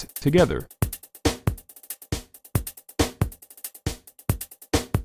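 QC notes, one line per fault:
No technical faults can be heard anywhere in the audio.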